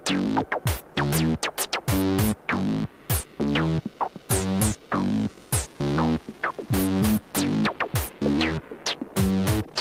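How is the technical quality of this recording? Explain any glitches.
The technical quality of the recording holds up, with no glitches to explain.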